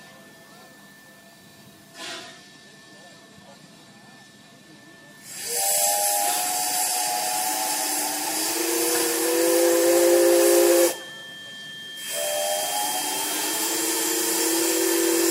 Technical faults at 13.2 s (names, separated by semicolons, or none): feedback whistle